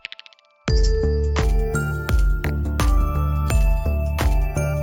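From 1.43 s to 4.83 s the sound carries imaging from sample-and-hold upsampling: a bright, metallic fizz riding on top, rising and falling with the level of the material. Each sample has been held and repeated instead of interpolated through a smoothing filter, so mirrored copies of the spectrum leak above the original band. The lowest copy sits between 8 and 16 kHz at about 27 dB below the signal and moves opposite to the pitch, which fits a 16 kHz source raised to 48 kHz.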